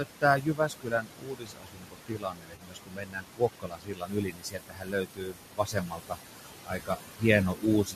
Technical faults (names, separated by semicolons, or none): noise suppressor artifacts; speech cut by the noise suppressor; AAC frame loss with concealment